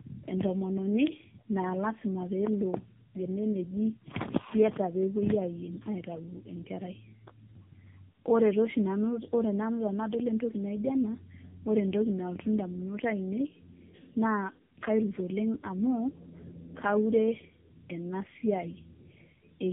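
Throughout, the speech shows tandem speech coding: decoded and re-encoded at each link, so a second narrowband coder reworked the first one's damage, fitting two AMR-NB stages around a G.711 link. Unlike a single coder, roughness and warble compound; nothing remains above 3.7 kHz.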